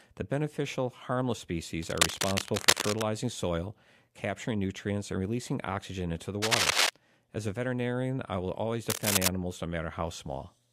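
Cable scratch noise occurs at 1.83–3.02 s (after "beneficial harmless", before "soil capturing nutrients and"), at 6.42–6.90 s (after "releasing oxygen into the") and at 8.90–9.30 s (after "veterinarian I will always"). Each is a patch of ragged rustling, a little louder than the speech. The likely cause is a worn cable or connector being moved, which makes its contact resistance jump. On a spectrogram these show as dense broadband smears, and in the waveform as clusters of uneven spikes.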